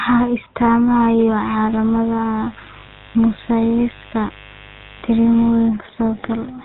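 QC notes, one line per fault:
Throughout: GSM full-rate codec. The speech has a buzzy, gravelly roughness because the coder rebuilds each sound from a vocal-tract filter driven by evenly spaced pulses, using only every third excitation sample, which fits GSM full rate at 13 kbps. The damage is plainly audible. On a spectrogram, energy stops sharply at 4 kHz with nothing above it. Harmonics look smeared and grainy, and the waveform shows coarse, pulse-like fine structure.
2.80 to 2.83 s: lost GSM frames. For a moment the sound freezes into a short, rough metallic ring. The decoder replaced the missing data by repeating the last good frame's settings, and the length points to a single lost 20 ms frame. On a spectrogram, a brief band of static, repeated spectral texture interrupts the normal movement of the formants. The waveform shows a small block of repeated cycles.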